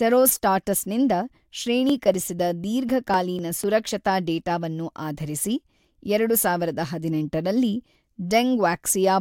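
Periodic USB or driver dropouts from 1.40 to 3.89 s: about every 0.25 s, roughly a millisecond of speech is skipped, leaving evenly spaced ticks.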